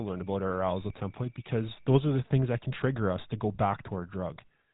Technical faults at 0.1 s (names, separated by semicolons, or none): GSM full-rate codec; switching supply whistle